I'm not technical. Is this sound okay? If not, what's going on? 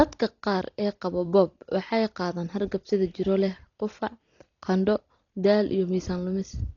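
No. From start to finish the speech sounds dull and muffled, with nothing above 6.9 kHz and a rough, fluttering hiss, likely from heavy Dolby Digital compression.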